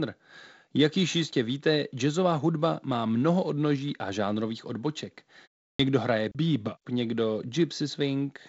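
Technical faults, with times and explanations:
5.74 s, clipped start after a pause: following "odnoží a žánrových odboček" and a 0.35 s gap, the output device had gone idle and took time to wake, so 55 ms of the next speech is lost and it starts abruptly, missing its opening sound.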